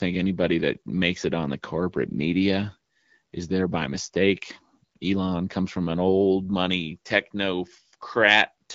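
No faults are audible; the speech runs over an AMR wideband (HD Voice) path at 12.65 kbit/s, with only the light coding effect that rate brings.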